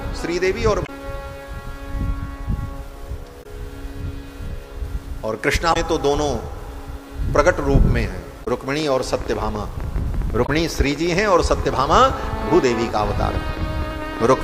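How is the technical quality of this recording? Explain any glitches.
The recording has two kinds of technical fault: repeated bursts of damaged data in a compressed stream, and a long train of clicks over the final third.

Damaged data in a compressed stream occurs at 0.83, 3.40, 5.70, 8.41 and 10.43 s, each lasting about 64 ms. Corrupted bytes in the encoded file prevent the decoder from reading those frames correctly. It loses sync and has to hunt for the next valid frame header. Each event is heard as a short chirp, squawk, click or brief hole in the sound.

A train of clicks runs from 8.80 to 14.24 s, with around seventy pulses at an irregular rate of about 12.2 per second. The most likely source is interference from nearby equipment or an unstable interface injecting repeated spikes into the signal path. The clicks are similar in shape and peak at about 5 dB above the surrounding audio, so they stand out as uneven ticking. 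The damaged-data burst at 10.43 s falls within this stretch.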